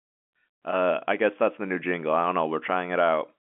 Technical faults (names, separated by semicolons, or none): none